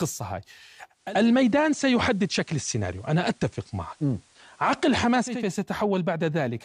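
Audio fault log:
0.89–5.49 s, digital radio blending to analogue: faint hiss well below the speech, level shifts about 1 dB; receiver crossfaded over 294 ms to FM.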